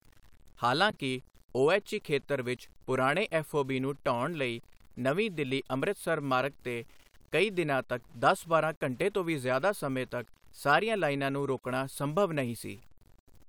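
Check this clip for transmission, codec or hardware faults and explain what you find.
Two faults are present in this speech clip: one runs its full length, and one is a brief glitch near the start.

Low bit depth without dither, throughout: the speech carries a grainy distortion that rises and falls with the voice, roughly 35 dB below the signal, and roughens quiet passages. The likely cause is truncation to a coarse word length without dither, consistent with about 8 bits.

Damaged data in a compressed stream, from 0.90 to 0.94 s: a short glitch cuts in where corrupted frames were misread. The decoder lost sync there and had to find the next valid frame header, so the audio blips.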